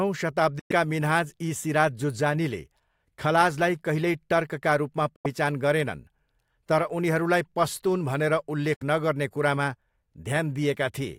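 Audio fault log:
0.59–0.71 s, 5.16–5.26 s, 8.74–8.83 s, Bluetooth dropout: the speech cuts to sudden silence for roughly 0.12, 0.11 and 0.09 s, the second right after "टर्कका रूपमा" and the third just before "नगर्ने कुरामा", then resumes further on with a piece of speech missing. This is likely late audio packets being dropped on the wireless link.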